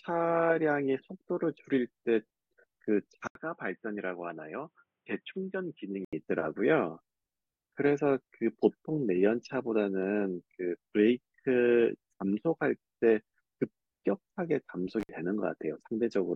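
At 3.27 s the speech goes dull and boxy after a silence of 80 ms. Nothing above 3.8 kHz survives, the level drops by about 5 dB, and a new noise floor sits about 55 dB down. The input likely switched to a poorer device. It recovers at 6.13 s.

At 15.00 s there is an intermittent contact. A loose connection opens for about 61 ms. The speech cuts out with crackle at each edge and faint hiss while the line is open. It closes again by 15.09 s.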